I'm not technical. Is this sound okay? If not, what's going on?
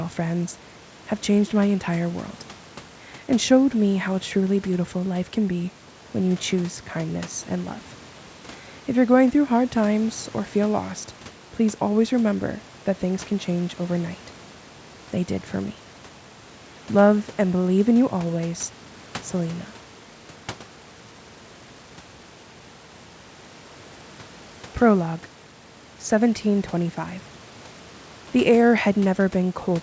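Yes, the sound is technically fine: it has the ordinary character of a call, with sound up to about 8 kHz and a faint room background well beneath the speech, and nothing has gone wrong with it.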